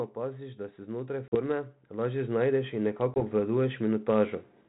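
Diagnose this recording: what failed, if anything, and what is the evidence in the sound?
The speech and its background swell together by about 11 dB between 0.15 s and 3.8 s. This is automatic gain rising in call processing: the AGC judged the input too quiet.

Hard-edged gaps at 1.28–1.36 s and 3.14–3.22 s, each followed by slightly distorted speech: packet loss on an ADPCM call, desynchronising the G.726 decoder's predictor.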